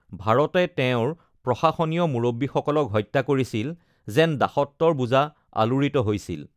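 No dropouts, clicks, distortion or other transmission faults are audible anywhere in the recording.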